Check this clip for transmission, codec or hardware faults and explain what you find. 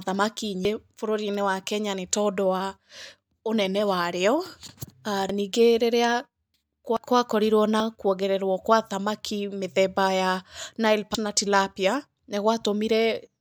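Five abrupt jumps break up the speech, at 0.65, 5.29, 6.97, 7.80 and 11.15 s. Each is a jump where the sound skips forward with no gap of silence, as if a slice of the recording were cut out and the ends spliced. The skips are short: roughly a third of a second at 0.65 s, about a fifth at 6.97 and 11.15 s, and about a tenth at 5.29 and 7.80 s. This is likely a dropped buffer (overrun), where the capture software fell behind and the hardware overwrote blocks of samples before they were collected.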